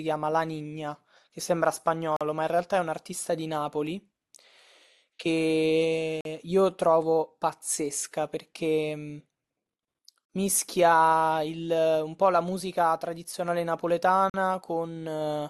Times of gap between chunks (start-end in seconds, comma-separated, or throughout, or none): 2.16-2.21, 6.21-6.25, 10.25-10.30, 14.30-14.34